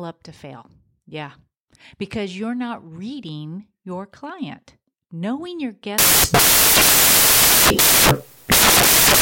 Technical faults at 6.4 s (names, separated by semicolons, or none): samples built from the wrong bytes